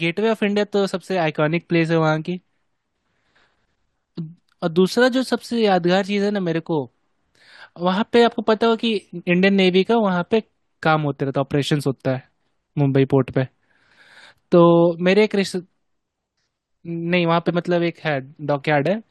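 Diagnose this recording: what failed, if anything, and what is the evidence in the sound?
Damaged data in a compressed stream at about 17.48 s: the speech is broken by a very brief chirp or blip, over in a few milliseconds. The failure is at the codec stage, in the encoded data itself rather than in the analogue path. Some bytes in the compressed stream were corrupted, so the decoder misread or discarded the affected frame, lost its place, and resumed only once it found the next valid frame header.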